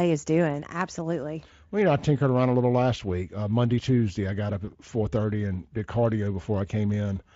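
Right after "I got up", around 4.65 to 4.72 s, there's VoIP packet loss concealed by the speech codec. About 20 ms went missing, which fits a single lost frame, and the Speex decoder papered over it by stretching the last sound and fading it, so you get a brief buzzy or noisy smear that takes a moment to recover before "four thirty and did".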